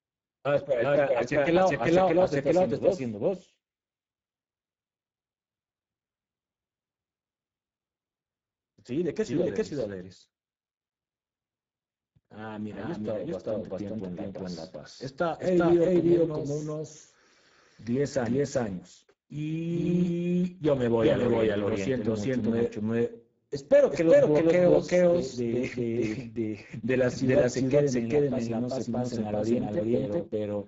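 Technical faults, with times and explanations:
throughout, doubled audio track: a second full-band copy of the speech trails by about 0.4 s at roughly equal level, likely from a slower second capture path. Unlike room echo or reverb, it has no decay, no room colour and no further repeats.
throughout, Speex codec: speech sounds hoarse and noisy, with plainly audible coding damage and nothing above 7.7 kHz, consistent with a bitrate near 10 kbps. The upper band is a noise-like fill rather than real detail, which sets it apart from simple low-pass filtering.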